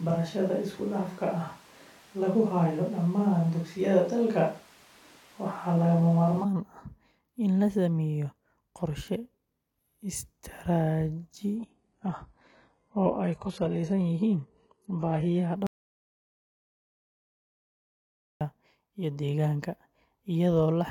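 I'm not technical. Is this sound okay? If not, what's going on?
No. From the very start until 6.43 s, the sound has a switch to a distant microphone. It is roomy and hollow, thinner in the bass, with faint background noise, but at about the same loudness. The likely cause is a mic further away standing in for a close one.

From 11.56 s to 15.56 s, the adaptive stream drops to a lower bitrate, with no gap. The treble is cut off above about 11.5 kHz, a sign the connection slowed and a lower-quality version was played.

At 15.67 s there is an audio dropout to silence lasting 2.74 s, until 18.41 s. The sound cuts out completely, with no room noise, then resumes mid-flow. The likely cause is a lost input, and whatever was said during that gap is missing.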